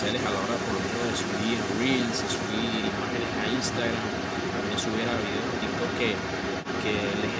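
Block size mismatch (padded) runs through the whole clip: each stage writes blocks slightly shorter than the 1024-sample blocks the next stage reads, so zeros fill the remainder. These tiny gaps produce a steady 46.9 Hz buzz, and the speech runs 0.999 times normal speed with its timbre unchanged.

Other side's voice leaking through is also present from 0.0 to 7.4 s. A second voice sits under the speech at about the same level, likely because the far end played through a loudspeaker and echo cancellation missed it. The call microphone processing leaves nothing above 8 kHz.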